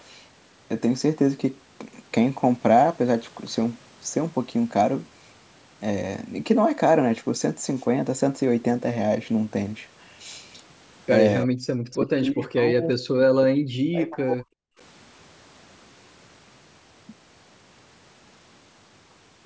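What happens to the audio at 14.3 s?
At 14.3 s the speech sits inside a stretch, from 11.45 to 14.68 s, of speech suppressed in double talk: the level sinks by up to about 40 dB and breaks up in pieces, likely because an echo canceller mistook it for echo while both sides talked. The waveform thins to near-flat fragments, and the spectrogram shows gaps and faded high bands.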